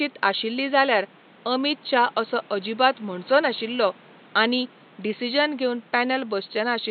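No technical faults can be heard anywhere in this speech recording. The room noise in the background sits at about 28 dB below the speech, as it belongs to the recording space rather than to the system.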